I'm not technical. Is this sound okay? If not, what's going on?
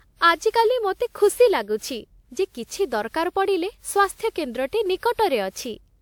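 No. Throughout the speech there's a swirly, hollow, smeared quality, and the starts of sounds are blurred. This is generation loss: the recording was likely squeezed and unpacked by a lossy codec around seven times, each pass adding fresh damage.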